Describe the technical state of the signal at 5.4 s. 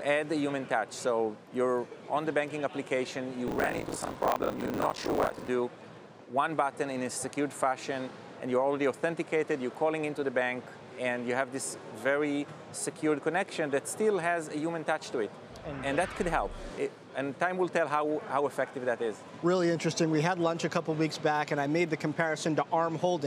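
At 5.4 s buffer tearing is still under way (3.46–5.49 s). Writer and reader pointers cross each period, splicing in roughly half-buffer chunks from about 40 ms earlier, giving a 50 Hz rattle that, unlike mains hum, vanishes whenever the signal stops.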